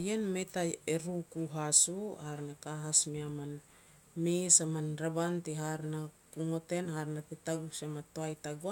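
No technical faults can be heard anywhere in the recording. The speech runs from beginning to end with nothing in the signal that calls for comment.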